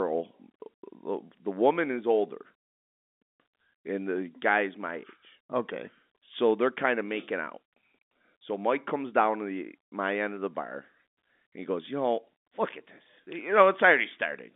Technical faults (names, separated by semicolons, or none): none